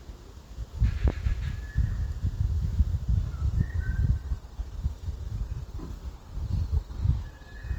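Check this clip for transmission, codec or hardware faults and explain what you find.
Two faults turn up here. From 1.08 to 1.33 s there's a loud pop, actually a double one, peaking about 15 dB over the sound. It's likely a voltage spike from a plug or switch, shaped by the circuitry downstream. Then from 3.39 s to the end there's a sudden switch to an adaptive stream at a lower bitrate with no gap. The stream dropped to a leaner encode, which fits a fall from around 64 to 24 kbit/s Opus, so the codec artefacts get more noticeable.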